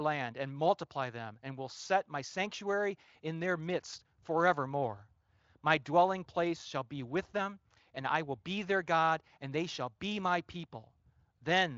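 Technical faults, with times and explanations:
No technical faults are audible.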